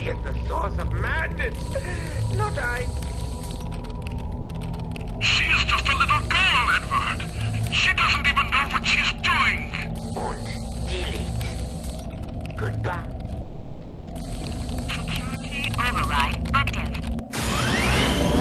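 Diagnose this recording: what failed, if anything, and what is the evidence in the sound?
Two short gaps where the sound gives way to comfort noise: a brief 80 ms one at 4.41 s, and a longer one from 13.41 to 14.07 s. That's likely sound dropped by the voice detector, with Opus DTX treating real signal as background and pausing transmission.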